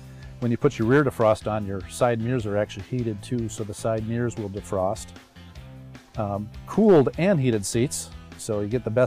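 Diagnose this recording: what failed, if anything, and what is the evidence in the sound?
Hard clipping at a level stage, most plausibly the converter input. From 0.65 to 1.32 s the peaks flatten and the sound turns crackly and harsh. A shorter burst follows at 6.88 to 7.01 s. The signal overshot the stage's ceiling by about 4 dB in the first stretch and about 5 dB in the second. The waveform tops were sliced off, and those flat edges spray high harmonics across the upper spectrum.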